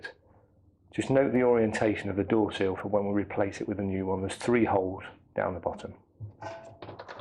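MP2 compression runs throughout the recording: the sound is dull and carries a gurgling, granular roughness, likely from MPEG Layer II coding at a rate that fits roughly 80 kbps. With so few bits, upper sub-bands flicker in and out and the remaining bands are quantised coarsely. Bit error spikes occur at 1.36 s and 2.80 s, each a single sharp tick unrelated to the surrounding audio. A flipped bit makes the sample value jump by a power of two for one sample and then return, spraying a broadband click across the spectrum.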